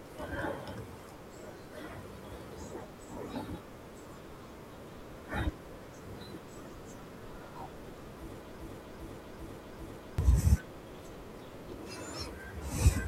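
At 8.60 s the speech locks into a broken-record loop: a fragment about 0.40 s long plays four times back to back, identically, until 10.18 s, and whatever should have been said in that stretch never arrives. The likely cause is a stalled player or stream resending the last piece it held. Unlike an echo, nothing decays or overlaps, and unlike a short stutter, each repeat is a full, exact copy.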